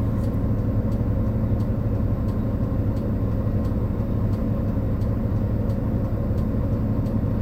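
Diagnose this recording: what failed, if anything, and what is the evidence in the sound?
Nothing here points to a failure at any stage of the chain; the everyday sounds in this recording come across just as they should, with nothing to diagnose.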